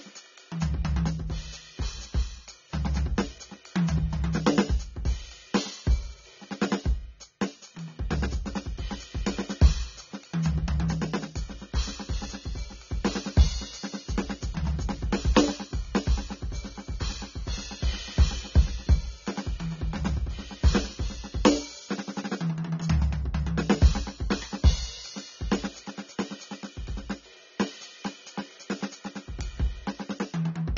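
From start to finish the music sounds dull and smeared, with nothing at all above about 7 kHz and a warbling, fizzy texture clinging to sustained tones. This is AAC compression damage, plainly audible, most likely from AAC-LC at a very low bitrate, which fits roughly 24 kbps: the encoder drops the top of the spectrum and coarsely quantises what remains, leaving gaps that swirl and shimmer.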